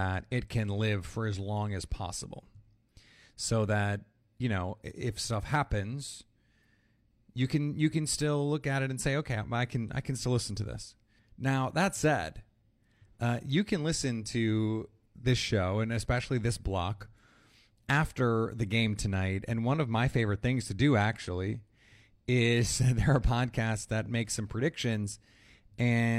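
No technical faults can be heard in this speech recording.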